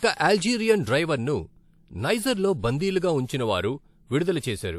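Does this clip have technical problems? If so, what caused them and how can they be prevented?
Yes. Pre-echo occurs from 3.25 to 3.29 s in this speech clip: about 35 ms of hiss rises just before a sharp onset, which then sounds softened. A transform codec spread quantisation noise meant for the loud attack across its whole block, so the quiet stretch ahead of it was filled too. Unlike reverb or a tail, this smear comes before the transient, not after. Preventing it means encoding with shorter transform windows around attacks (block switching) or a higher bitrate.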